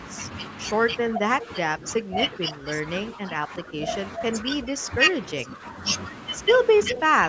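From 1.10 to 5.04 s, the echo canceller likely could not tell this talker from loudspeaker echo while both sides spoke, causing speech suppressed in double talk. The voice drops in pieces by up to about 15 dB, roughly two seconds in all. It dips again more briefly from 5.35 to 5.82 s.

From 6.95 to 7.00 s, an echo leak is heard as the far end's echo canceller likely failed to cancel everything its microphone caught. A short scrap of the voice returns 367 ms late, about 10 dB below the speech. Overlapping it, from 6.96 to 7.24 s, the double-talk suppression returns, cutting the talker by up to about 20 dB.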